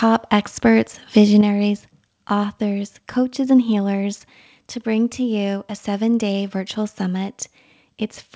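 At 0.65 to 0.67 s the input level likely drove the converter past full scale, a microphone overload of about 1 dB. A small fraction of the waveform peaks are flattened, giving that loud moment a brief harsh, crackly edge.

At 1.41 s the call software likely reacted to the peak by cutting the input gain in one step, a microphone volume stepped down by about 6 dB. Speech and background drop together abruptly. The level then stays noticeably quieter, heard through the G.722 call path with nothing above 8 kHz.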